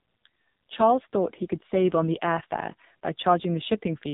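AMR narrowband mobile codec damage runs throughout this speech: nothing above 3.8 kHz survives, and the heavy buzzy, synthetic texture suggests one of AMR-NB's lowest modes, around 5.9 kbps.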